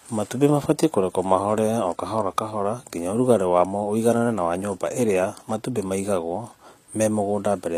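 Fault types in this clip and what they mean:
HE-AAC compression: treble plainly sounds synthesized, likely rebuilt by spectral band replication; s sounds come out gritty, nothing above 14.8 kHz, fitting about 24 kbps.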